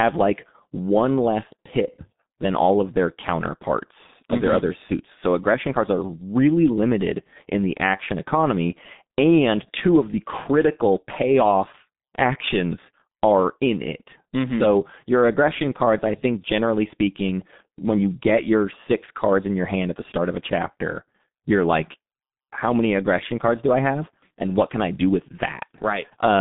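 From start to finish the speech carries heavy G.723.1 codec damage: a low-rate telephony coder, consistent with roughly 6 kbit/s, working in coarse frames. Nothing reaches above 3.8 kHz, the band sits at about 150 Hz to 3.7 kHz, and slow model updates leave voicing hoarse and consonants smeared.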